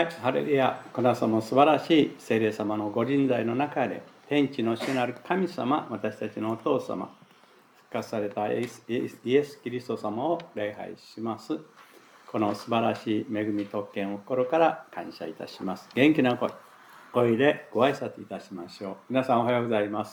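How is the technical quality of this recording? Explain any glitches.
Nothing in the recording stands out as a glitch; it runs its full course with no dropouts, clicks, stutters or other technical hiccups to point to.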